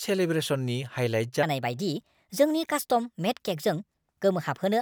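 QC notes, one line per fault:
0.96 s, dropped buffer (overrun): the speech jumps ahead by around 15 ms with no silence, likely because samples were overwritten before being collected.
1.43 s to end, section at the wrong speed: speech runs 1.26 times too fast and about four semitones higher, likely from playback against the wrong clock.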